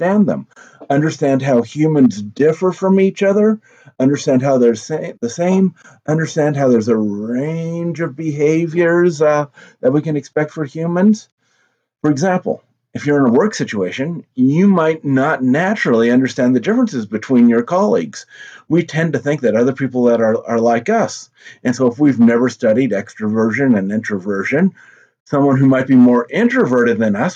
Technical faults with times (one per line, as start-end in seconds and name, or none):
none